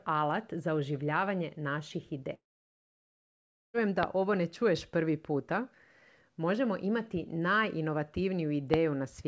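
A speech recording carried over a call link, band-limited with nothing above 8 kHz, which fits a G.722 path at 64 kbps, and marred by two kinds of fault. From 2.34 s to 3.76 s there is a long network dropout: about 1.4 s of audio is lost. The receiver briefly extends the last sound as a fading buzz, and for roughly 1.3 s only silence or a low steady floor remains. Speech then resumes with the missing section simply gone, not delayed. The likely cause is a stall in packet delivery long enough to exhaust the jitter buffer's concealment. Two loud pops follow, one at 4.03 s and one at 8.74 s. Each is a single sharp transient lasting about 20 ms and standing out by something like 20 dB over the speech, which continues underneath without interruption. These are likely voltage spikes entering the chain from a connector, a switch, static discharge or a driver glitch, shaped by the downstream circuitry into a short click-thump.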